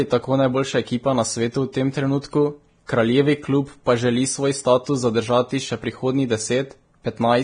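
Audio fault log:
Throughout: Vorbis compression. Nothing above 9.7 kHz, and the treble is heavily grainy and hissy, likely from Vorbis near 23 kbps. The spectrogram shows a flat ceiling with speckled noise below it.
2.86–2.89 s: pre-echo. A short hiss spreads about 29 ms ahead of a sharp onset because the block's quantisation noise fills the quiet gap. The waveform shows low fuzz before the attack.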